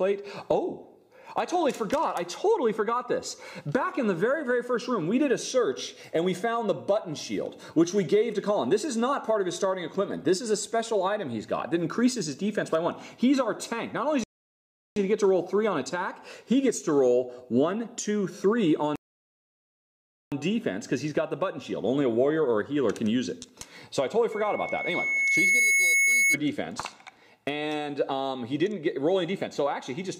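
The audio halts twice in rebuffering stalls, from 14.24 to 14.96 s and from 18.96 to 20.32 s, adding 0.73 s and 1.36 s while the player waits for data, then resumes exactly where it stopped. Each shows as a flat line on the waveform and a blank vertical band on a spectrogram. From 24.32 to 26.38 s a loudspeaker feedback squeal appears: a microphone re-amplifying its own loudspeaker lets a 2.2 kHz tone swell over roughly a second and a half to a few dB above the sound, drawn as a bright, thickening horizontal line.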